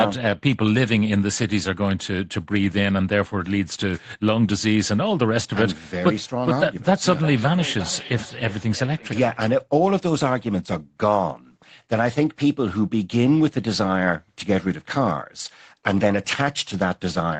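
From 7.16 to 9.56 s there is feedback echo between two devices: another device replays the sound, the original microphone recaptures it, and nothing cancels that loop. Each phrase returns roughly every 0.4 s, thin and ringing, about 14 dB below the speech. A spectrogram shows fading copies of each syllable at that spacing, and the waveform shows shrinking repeated bursts.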